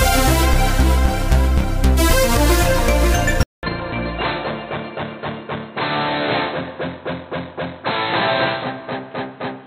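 At 3.43 s the input likely switched to a poorer device. After a 200 ms silence, the sound returns dull and boxy through to the end, with nothing above 4.1 kHz, roughly 5 dB quieter, over a new background noise about 30 dB down.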